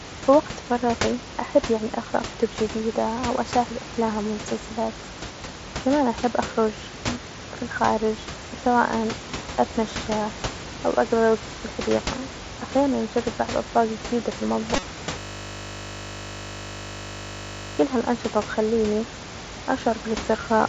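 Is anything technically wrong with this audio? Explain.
Yes. At 14.76 to 14.83 s, just after "بعض أصناف جديدة في", concealed Bluetooth headset packet loss: about 45 ms of headset packets went missing across 60 ms, and the phone filled the gap by repeating recent waveform, giving a brief buzzy smear with a slight warble where the real audio resumes.

From 15.19 to 17.79 s, just before "هالأنشطه بتخليني", a system hang loop: the computer stalled while the audio hardware kept replaying one 20 ms buffer, producing a steady 50 Hz buzz for 2.6 s. Room noise sits about 11 dB below speech.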